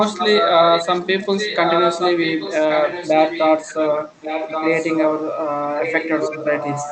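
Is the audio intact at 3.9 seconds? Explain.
No. From 0.13 to 5.22 s, a copy of the speech about 5 dB quieter trails 1.13 s behind. This is an echo leak, likely from a loudspeaker's echo canceller letting its microphone pickup return.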